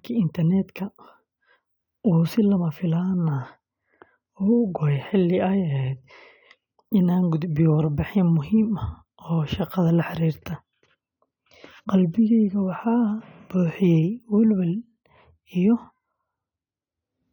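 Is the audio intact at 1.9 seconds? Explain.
Yes, the speech at 1.9 seconds is intact, with no fault present at that moment.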